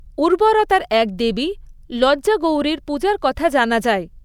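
No technical faults turn up anywhere in this speech recording, so there's nothing to flag.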